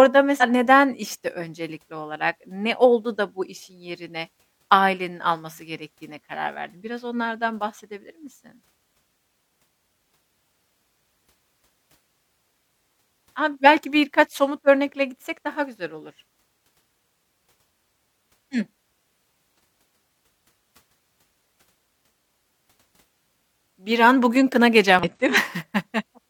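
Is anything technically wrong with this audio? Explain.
Yes. The speech shows damaged data in a compressed stream at three points: 0.38 to 0.43 s, just before "neden işte öncelikli olarak"; 19.56 to 19.59 s; and 24.99 to 25.04 s, right after "an bugün". Each lasts about 40 to 55 ms. Part of the compressed data there was corrupted, so the decoder misread or rejected those frames, lost sync and had to search for the next valid frame header, leaving a brief disruption in the audio.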